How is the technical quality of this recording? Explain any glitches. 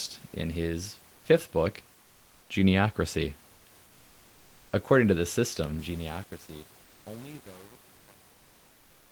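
The recording has two kinds of fault: brief patches of comfort noise in place of the background, and truncation distortion on the closing fade.

Comfort noise in place of the background appears at 1.15 to 1.25 s, between "in his" and "fifth book", and again at 7.95 to 8.07 s, lasting about 100 ms and 120 ms. The likely cause is discontinuous transmission, with the sender going quiet during pauses and the receiver filling the gap with synthetic noise, which fits Opus DTX. The room's real background, about 34 dB below the speech, gives way to a smooth, featureless hiss at about the same level. On a spectrogram the fine texture of the background turns into an even, blurred band for those short stretches.

Truncation distortion on a fade starts at 5.79 s, just after "to the system", and runs to the end of the clip. The signal behaves as if it keeps only about 7 bits with no dither. As the level drops, the tail becomes gritty. 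A zoomed waveform shows staircase steps, and the spectrogram shows harsh broadband specks instead of a clean, tapering decay.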